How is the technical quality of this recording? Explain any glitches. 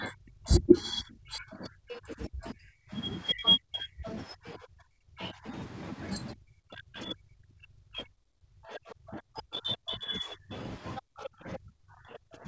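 The recording has two call-related faults: the speech is repeatedly pushed down, and a second voice bleeds through underneath it. The band stops at 8 kHz throughout, consistent with the G.722 call path.

Speech suppressed in double talk runs from 0.0 to 12.48 s, with dips reaching roughly 35 dB. The likely cause is an echo canceller that could not tell the talker from loudspeaker echo and attenuated everything. The voice sinks or breaks off, and the waveform shows sudden collapsed stretches.

The other side's voice leaking through appears at 1.89–2.49 s, 3.44–5.27 s, 7.00–7.04 s, 8.74–9.77 s and 10.96–12.18 s. It sits about 10 dB below the speech, about 15 dB below at 8.74–9.77 s and about 25 dB below near 7.0 s. Residual loudspeaker echo likely escaped cancellation, so a second voice shows as overlapping harmonic traces on the spectrogram.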